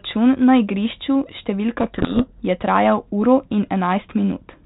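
From 1.78 to 2.40 s the speech is buried under harsh, grinding distortion. This is a codec payload misread: the G.726 decoder unpacks each code word with its bits in the wrong order, pointing to a bit-order mismatch, so the adaptive prediction tracks garbage. The 32 kbit/s G.726 path around it carries only light, band-limited coding noise.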